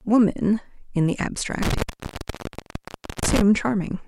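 A speech recording with an intermittent contact fault between 1.63 and 3.41 s. A loose cable or plug breaks the signal path, so the sound drops out for about 1.41 s in total. Crackle marks the edges of each break. Faint hiss remains while the line is open.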